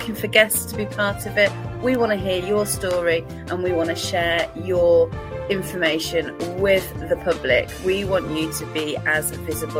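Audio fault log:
1.95 s and 2.91 s, bit error spike: two isolated sharp ticks, each over in an instant, broadband and unrelated to the surrounding sound. At each point a flipped bit in a binary sample value knocked it up or down by a power of two before it fell straight back. The first affects a single sample; the second spans three consecutive samples, so it lands as a slightly fuller click than the first, though still far too brief to carry any pitch.
4.33 to 8.33 s, adaptive stream at a lower bitrate: for about four seconds the sound abruptly degrades, with more coding artefacts, then snaps back at the end with no gap either side. The stream switched down to a leaner encoding when the connection slowed. The character fits an Opus stream dropping from around 64 to around 32 kbit/s, which spends fewer bits on high frequencies and reconstructs them more approximately.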